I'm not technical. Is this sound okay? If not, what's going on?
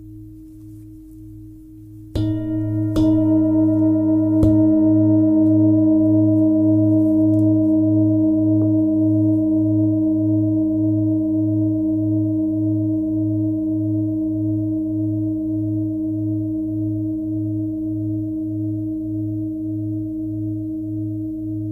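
Yes, it sounds fine, and nothing stood out as a problem when I listened.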